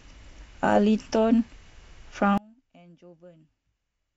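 From 2.38 s to the end, one stereo channel has likely been inverted in polarity, so summing to mono cancels what both sides share. The centred speech drops by about 30 dB, leaving only a faint residue of the difference between channels.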